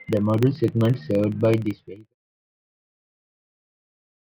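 A steady buzz of small ticks runs through the whole speech clip at about 23.4 Hz, strongest where the sound is loud and dying away with the fade-out from around 1.5 s to 2.15 s. It comes from a filter restarted on every block, which fits a 2048-sample block.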